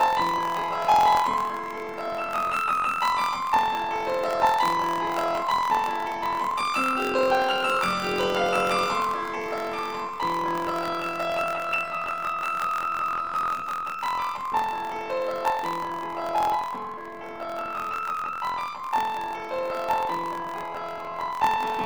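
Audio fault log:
throughout, planar audio read as interleaved: each block of about 23.22 ms, which fits a 1024-sample block, plays twice at double speed, left half then right, so pace holds but the sound sits an octave high with a flutter at 43.1 Hz.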